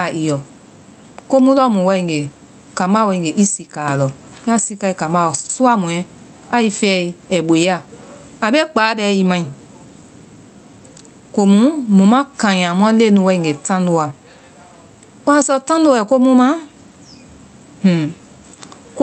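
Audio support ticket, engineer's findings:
Gain pumping, throughout. Likely cause: mic input gain set far too high, with a fast limiter or compressor clamping down on every loud speech peak. Result: gain swings by around 15 dB. Loud and soft passages are pulled close together, and the speech sounds squashed. The call path adds coding noise and cuts the top end near 8 kHz, consistent with an Opus stream at about 32 kbps.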